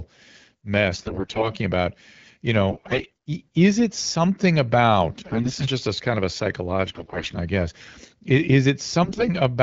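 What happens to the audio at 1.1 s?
At 1.1 s the sound falls inside a burst of AMR bit errors running from about 0.93 to 1.51 s. Over that stretch a heavy share of the codec's less protected bits, roughly a fifth, arrive flipped while the frames still pass their checksum. The excitation pulses land in wrong positions and the fine pitch, gain and spectral values go astray, so the otherwise clear AMR-WB speech at 12.65 kbit/s turns hoarse, scratchy and gargly while keeping its rough pitch and level. On a spectrogram the harmonic striations smear into ragged, noisy texture across the band. The waveform keeps a similar envelope but loses its regular periodic shape.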